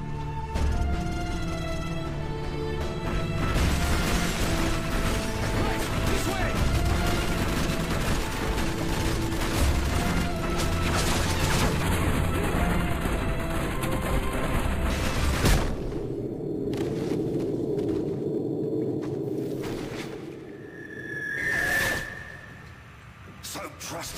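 From 11.83 s to 14.90 s, channel delay (comb filtering) gives the sound a hollow, phasey quality. One channel lags by roughly a tenth of a millisecond, only a few samples. When the channels are summed to mono, the first cancellation falls near 5 kHz. A spectrogram shows fixed, evenly spaced dark horizontal bands.

At 12.61 s, damaged data in a compressed stream produces a brief glitch. The decoder misread corrupted frames, lost sync and skipped to the next valid header. The waveform shows a sharp discontinuity, and the spectrogram a thin vertical smear of broadband energy.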